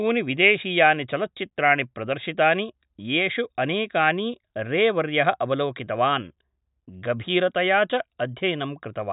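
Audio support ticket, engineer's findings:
Listened through the speech recording and found nothing to flag; no action needed on this ticket.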